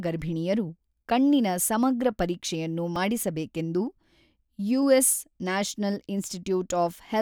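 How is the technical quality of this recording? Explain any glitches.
One glitch stands out. At 2.96 s, just after "ಗರ್ಭಿಣಿಯರು ಕಣ್ಣಿನ ಸಮಗ್ರ ಪರೀಕ್ಷೆಯನ್ನು", a dropped buffer (overrun) likely overwrote samples before they were read. About 20 ms vanishes, heard as a jump with the speech skipping ahead.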